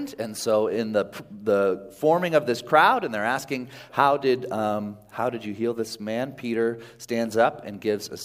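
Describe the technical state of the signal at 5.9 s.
At 5.9 s the signal is intact, with no dropout, distortion, clicks or other audible fault at that point.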